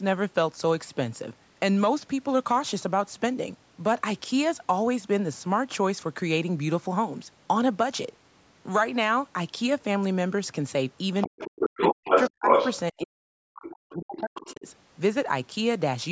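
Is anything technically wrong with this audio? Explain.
Yes. The speech has two related call faults.

From 11.21 to 12.77 s and again from 14.16 to 14.55 s, the other side's voice leaks through. It is likely residual echo the canceller missed. The first stretch is slightly louder than the speech. The second is much quieter.

The speech is suppressed in double talk from 11.28 to 12.15 s, 12.35 to 12.53 s and 12.92 to 14.66 s. It likely happens because the canceller turned down both voices at once. The talker nearly vanishes in very deep dips.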